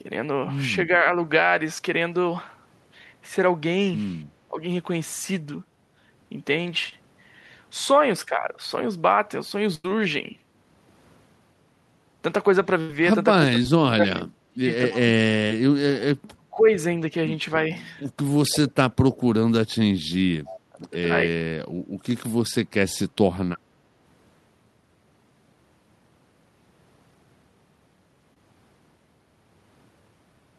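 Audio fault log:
4.49–4.58 s, 13.39–14.66 s, 14.90–15.11 s, 16.19–16.66 s, 18.50–19.32 s, 20.69–20.85 s: speech suppressed in double talk. The talker dips by roughly 10 to 35 dB, likely because the echo canceller mistook overlapping far-end speech for echo and turned everything down. A spectrogram shows darkened bands with the upper harmonics thinning first, and the waveform narrows sharply.
6.89–6.93 s, 13.63 s, 15.48–15.51 s, 28.34–28.37 s: short concealed packet loss. Between 10 and 30 ms went missing and was filled by extending the preceding sound, which leaves a tiny smear or wobble. A spectrogram shows a brief stretch of repeated or blurred texture with a faint seam where real audio resumes.
9.75–9.85 s, 12.81–12.90 s: burst of packet loss. About 90 ms and 80 ms are gone, bridged by a held, fading continuation of the last sound before speech picks up further along. A spectrogram shows flat, smeared horizontal streaks, and the waveform shows a decaying envelope with audio cut out.
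20.45–20.57 s, 23.54–23.58 s: echo leak. A faint copy of speech returns 291 ms late and about 20 dB down, likely from a loudspeaker whose echo canceller let residue through. A spectrogram shows a weak, time-shifted duplicate of earlier patterns, and the waveform shows small ghost bursts.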